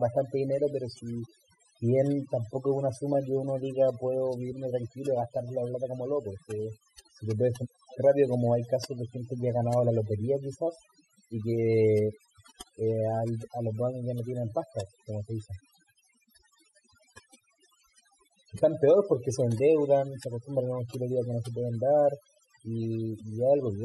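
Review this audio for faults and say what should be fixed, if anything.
The whole speech clip, start to finish, suffers from overdone noise removal. The reduction was pushed so hard that any frequency band sitting near the tool's noise estimate gets pulled way down or switched off, and the softer parts of the voice get caught in that too. So the background in the pauses drops and breaks up into little twinkling specks. Next time, back the reduction amount off and let a bit of the room noise stay in.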